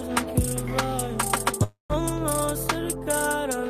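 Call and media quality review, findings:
Call audio freeze, 1.63 to 1.93 s. Packets likely stalled in transit, jitter buffer drained. Receiver stretches last sound into fading fill, then about 140 ms silence. Playback resumes where it stopped: nothing lost, about 260 ms added delay.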